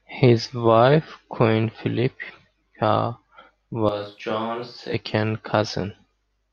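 At 3.89 s the speech suddenly turns roomy and hollow, loses its low end, and drops by roughly 10 dB, with background noise now sitting only about 35 dB under it. That's the sound of a switch to a distant microphone: the close mic's feed most likely dropped out, leaving something farther off, like a camera mic, to carry the audio. At 4.94 s it snaps back just as abruptly to the close, fuller sound.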